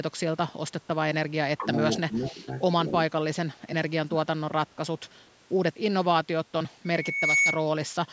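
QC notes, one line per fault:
1.58–1.67, 2.32–2.37 and 4.04–4.30, speech suppressed in double talk: the sound dips briefly each time, shallow at first (about 10 dB, then about 5 dB) and much deeper in the last one, about 20 dB down over roughly a third of a second. The likely cause is the echo canceller getting confused while both sides talked at once. It couldn't tell its own talker from the loudspeaker echo, so it ducked the lot.
1.94–2.31 and 2.88–2.92, echo leak: a faint delayed copy of the speech trails in 232 ms late. It's roughly 15 dB below the speech in the first stretch and a bit quieter, about 20 dB down, in the short second blip. This is likely a speakerphone whose echo canceller didn't fully scrub what its mic picked up off the loudspeaker, so a residue got sent back down the line.
6.85–7.66, loudspeaker feedback squeal: a single tone at 2.2 kHz creeps in and swells over about half a second until it sits roughly 5 dB above the speech, then carries on to 7.66. 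That's the classic acoustic loop. A mic is hearing the loudspeaker it feeds, and at 2.2 kHz the loop gain tipped past one, so that frequency kept feeding on itself and grew into a squeal.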